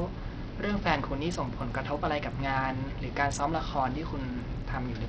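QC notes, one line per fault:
Throughout, Bluetooth SBC compression: the speech has a starved, flickering top end, with sibilants dropping in and out instead of being cut off cleanly, and a gritty, grainy roughness riding on the sound. The damage is heavy and likely comes from a small SBC bit pool, which fits a bitrate around 64 kbps. The fixed sub-band split leaves the upper bands with few bits. Unlike a steady low-pass filter, the missing treble comes and goes.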